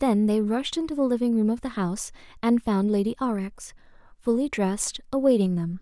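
No technical faults can be heard anywhere in the recording.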